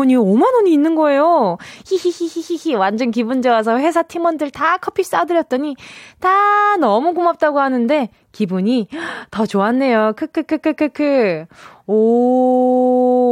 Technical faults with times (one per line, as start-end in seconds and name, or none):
none